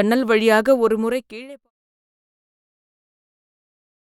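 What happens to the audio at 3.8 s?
At 3.8 s the audio is intact, with no fault of any kind at that moment.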